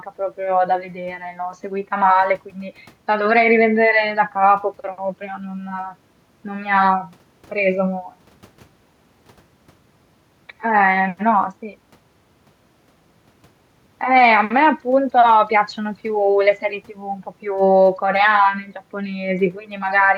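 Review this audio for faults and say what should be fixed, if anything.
No faults found in the speech recording; nothing to fix.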